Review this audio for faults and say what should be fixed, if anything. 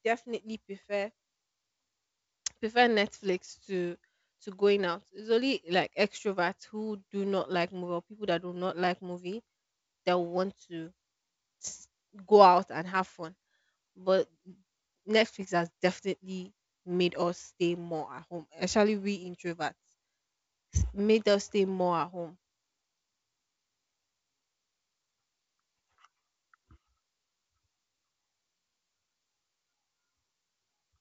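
Nothing here needs fixing; no faults can be heard in this audio.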